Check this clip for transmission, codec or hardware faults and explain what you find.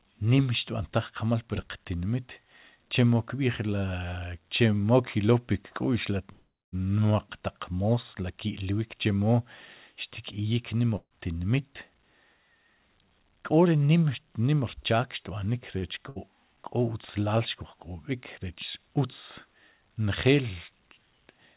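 There are five call faults in this speech, all squeezed into the middle stretch, and the audio stops at 4 kHz throughout, as you'd expect from a G.711 A-law call path.

From 6.32 to 6.75 s there's a call audio freeze. The last sound hangs as a fading buzz or hiss, then goes quiet for about 0.25 s. It's likely packets held up in transit while the jitter buffer ran dry. Nothing's lost, just a 0.4 s gap inserted.

There's a burst of packet loss at 10.96 to 11.13 s and again at 16.09 to 16.19 s. Each time the receiver stretched and faded the last sound, then jumped ahead, so about 150 ms and then 90 ms of speech is simply gone.

From 12.49 to 13.82 s there's a jitter buffer speed-up. Little pitch-period slices get trimmed to shed a backlog, roughly 150 ms in total. Speech runs about 11% fast at unchanged pitch, sounding hurried.

At 15.78 to 15.85 s there's a short stall from a late packet. 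The buffer emptied briefly, so one sound is held about 40 ms too long with a slight buzz or dip, then carries on intact.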